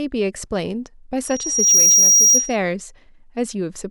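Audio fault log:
1.24 to 2.57 s, loudspeaker feedback squeal: the microphone is picking up the loudspeaker it drives, and around 5.7 kHz the gain around that loop rises above one, so that frequency keeps feeding itself. It swells over roughly half a second into a piercing single-pitched squeal that ends up about 10 dB above the speech, holding for under a second before it stops.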